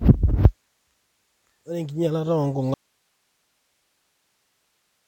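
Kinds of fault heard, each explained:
Audio dropout to a faint residue: from 2.74 s to the end of the clip, the speech cuts off abruptly mid-flow and never returns, leaving only a bed of hiss roughly 50 dB below the speech level. The change is a hard cut rather than a pause or fade. The likely cause is a loss of the incoming signal while the recording path after the break stayed live, so its own noise floor is all that continues.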